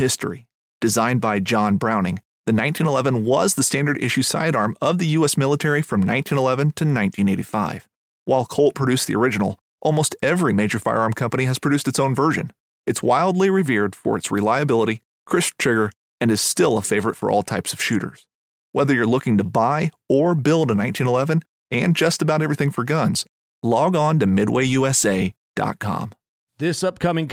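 No technical faults register anywhere in the speech recording.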